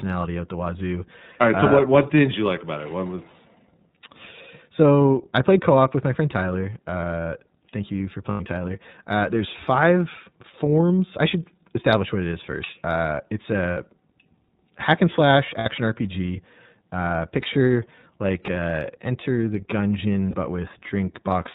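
The whole speech clip passes through the iLBC codec. Nothing above 4 kHz survives, and the damage is plainly audible. The voice sounds rough and slightly synthetic. The coding behaves like 30 ms independent frames at about 13 kbps.

Lost iLBC frames break in four times. At 8.31 to 8.41 s, a 90 ms gap fits three missing frames. At 13.71 to 13.78 s and 15.59 to 15.66 s, the gaps run 60 ms each. A short dropout follows at 20.30 to 20.34 s. The decoder fills each gap by repeating the last pitch cycle with added noise, giving a brief buzzy, held vowel. The voice recovers almost at once.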